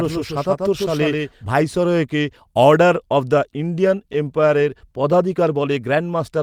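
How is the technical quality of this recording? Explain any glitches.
The recording has two faults, one at the very beginning and a cluster of small ones later.

From the start to 1.5 s there is a doubled audio track. A second, slower capture path likely fed the same speech in again, so a full-band copy about 5 dB quieter trails roughly 150 ms behind. It sounds like a dry slapback echo with no room tail, and it stops abruptly at 1.5 s.

Between 3.75 and 4.63 s there are scattered short gaps. About seven packets arrived late or went missing, and the receiver filled each hole by stretching the preceding sound, roughly 50 ms in total and none longer than about 10 ms. The speech stays clear but picks up ticks and brief smears.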